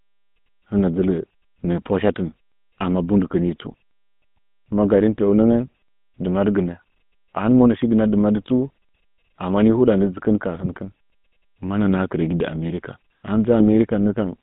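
The whole recording carries the GSM full-rate codec sound: the vocal tract is modelled and driven by a sparse pulse excitation, which leaves this speech plainly buzzy and gravelly, and the band runs only from about 150 Hz to 3.6 kHz, consistent with 13 kbps full-rate coding.

GSM bit errors then hit three times: briefly from 3.46 to 3.51 s, longer from 10.55 to 10.73 s, and from 13.6 to 13.68 s right after "ahin mɨ". Corrupted filter, pitch and gain values in those frames bend the spectrum and level, giving short squawks and gargly pops.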